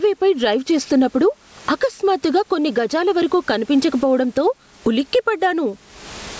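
Throughout this speech recording there is gain pumping, with the level swinging by something like 25 dB. Loud and quiet passages sit squashed close together. The likely cause is input gain set far too high for the microphone, with a fast limiter or compressor clamping down on each loud sound. The room noise sits about 41 dB below the speech, and the call's microphone processing leaves nothing above 8 kHz.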